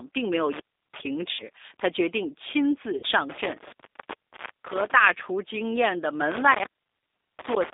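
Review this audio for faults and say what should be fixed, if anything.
Throughout the clip, the speech has the slightly rough, synthetic texture of the G.729 codec, bandlimited to roughly 300 Hz to 3.7 kHz, which fits an 8 kbit/s G.729A link. Unlike plain lowpass filtering, the roughness comes from rebuilding each 10 ms frame from a filter and a few pulses. Using a wideband codec would prevent it.

VoIP packet loss concealed by the speech codec appears at 1.31 to 1.44 s, covering an 80 ms gap, and at 2.97 to 3.06 s, covering a 60 ms gap, consistent with four and three 20 ms packets. Rather than dropping to silence, the decoder stretches the last sound into a fading buzzy tone or coloured noise. A jitter buffer and a more reliable network path would prevent this.

An intermittent contact opens from 6.31 s to the end of the clip, leaving a dropout of about 0.73 s. It is set apart from packet loss by the crackle at its edges and the faint hiss while the line is open, rather than a stretched tone. 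Reseating or replacing the cable or plug would prevent it.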